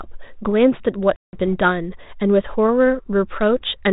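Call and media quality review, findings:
Packet loss on the ADPCM call, 1.16 to 1.37 s. Hard-edged silent gap of about 170 ms, which fits around fifteen lost packets. Decoder predictor and step size desynchronise from the sender's. Speech resumes slightly distorted.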